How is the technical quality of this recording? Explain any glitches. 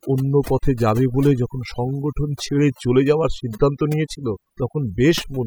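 The recording suffers from overdone noise removal, present from start to finish. A noise reduction stage was pushed too hard: any frequency band sitting close to its noise estimate gets pulled far down or shut off, and the softer components of speech fall below that line and vanish too. The gaps between phrases drop to near silence dotted with twinkling specks. Unlike a noise gate, which mutes everything at once, this thins individual bands.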